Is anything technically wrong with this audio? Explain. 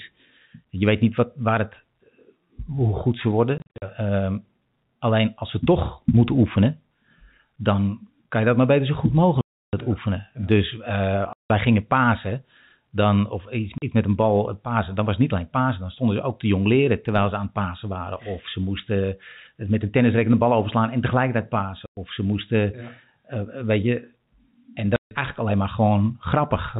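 Yes. The transmission dropped packets and the receiver played packet loss filled with silence instead of concealing the gaps, so the speech has abrupt holes with hard edges, their lengths matching 10 ms packets. They occur at 3.58 s (about 180 ms scattered over 240 ms, longest gap 50 ms), 9.41 to 9.73 s, 11.33 to 11.5 s, 13.78 s between "pasen dan of iets" and "met een bal eh", 21.86 to 21.97 s before "ze moesten", and 24.96 to 25.11 s before "eigenlijk alleen maar". The G.711 telephone band is audible throughout.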